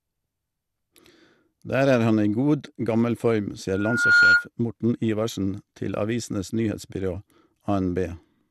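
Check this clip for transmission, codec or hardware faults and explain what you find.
Two faults stand out. A codec problem runs through the whole speech clip, and a feedback squeal interrupts it briefly.

MP2 compression affects the entire recording, and it is likely the cause. The sound is dull, with a gurgling, granular texture. Nothing is present above 12.2 kHz. An MPEG Layer II encoder divides the signal into 32 sub-bands and shares out bits among them. When bits run short, the upper bands are dropped entirely and the remaining ones are quantised coarsely. The plainly audible damage points to a low bitrate, around 80 kbps.

A loudspeaker feedback squeal runs from 3.69 to 4.47 s. It is a single tone at 1.4 kHz. The tone swells over about half a second and ends up roughly 10 dB above the speech. The microphone was picking up the loudspeaker it fed. At 1.4 kHz the loop gain went past one, so that frequency kept reinforcing itself.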